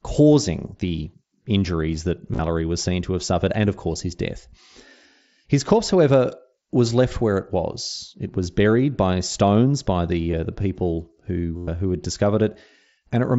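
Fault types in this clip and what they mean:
Concealed Bluetooth headset packet loss: dropped packets are refilled by repeating recent waveform, which looks like evenly repeating cycles and striped harmonics. This is longest and buzziest around 11.6 s.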